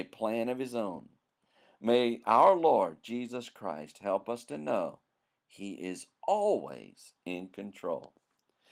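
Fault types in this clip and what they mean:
Nothing stood out as a fault on listening to this speech recording.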